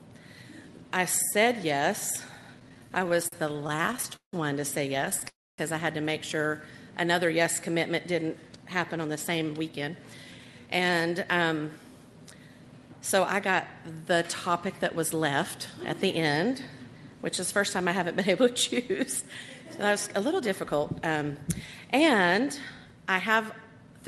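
From 2.59 to 4.36 s the audio hits repeated stalls, a stutter: packets kept turning up late, so the jitter buffer drained 25 times and the receiver stretched the last bit of sound over each hole, the longest about 171 ms. Roughly a quarter of that stretch is filler, though nothing's actually lost, so it just drags and hiccups. A short second burst follows at 5.05 to 5.24 s, four tiny gaps of about 13 ms at most.

Right after, at 5.29 s, there's a call audio freeze lasting until 5.61 s. The last sound gets held and fades, then about 250 ms of it is simply silent before the audio carries on where it left off, now about 293 ms later than before. That pattern points to packets being held up on the way, which likely emptied the buffer, with the receiver papering over the wait rather than dropping anything.

Then from 8.03 to 11.24 s you get a jitter buffer speed-up. The buffer had built up more audio than it wants, so the receiver kept snipping out little pitch-period-sized slices, about a third of a second in total, which makes it run around 10% fast at unchanged pitch and sound a bit rushed. 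A smaller one at 20.07 to 20.67 s runs about 8% fast, trimming something like 50 ms. Underneath it all the Opus call path caps the top end at around 12 kHz.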